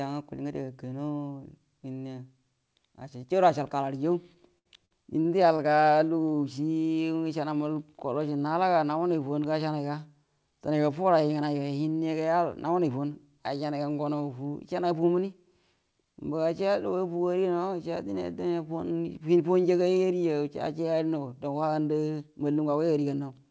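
A speech clip that runs through a G.722-style call path, so nothing above 8 kHz. From 4.48 to 5.61 s there are repeated stalls (stutter): five short gaps, the longest 70 ms and about 185 ms in all, where late packets drained the jitter buffer and the receiver stretched the last sound to fill in. Nothing's lost, but that stretch drags and stutters.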